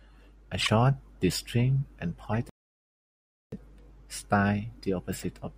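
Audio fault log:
0.62–0.69 s, 2.26 s, 5.13–5.24 s: corrupt frame decoded. Brief chirpy bursts replace the speech, each spanning a few damaged frames whose misread data puts energy at wrong frequencies.
2.49–3.52 s: playback stall. The speech halts mid-flow for about 1.03 s, then continues, likely because the player ran out of buffered data.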